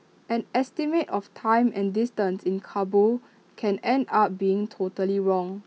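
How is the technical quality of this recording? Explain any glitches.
Nothing to flag here: the speech recording runs along without a single glitch worth mentioning.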